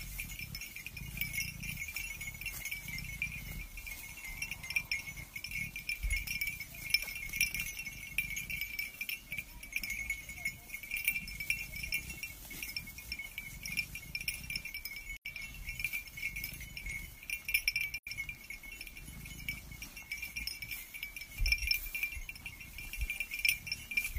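At 15.16 s and 17.98 s, AAC frame loss with muting leaves soft-faded gaps of about 85 ms, consistent with two missing frames, visible as blank spectrogram columns with tapered waveform edges.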